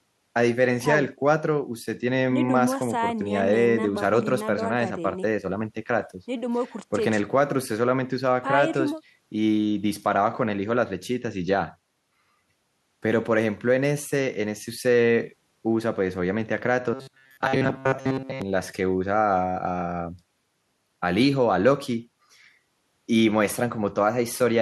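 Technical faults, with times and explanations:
16.94 to 18.42 s, robotic sound from repeated short buffers: the speech turns into a rigid, metallic buzz at 133 Hz that only loosely tracks the syllables. The likely cause is a chunk of about 7.5 ms being replayed while most of the real audio is skipped.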